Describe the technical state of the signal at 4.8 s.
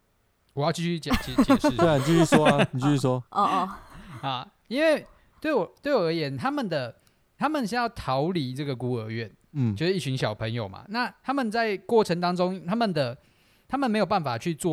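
At 4.8 s the speech signal is intact, with no audible technical fault at that moment.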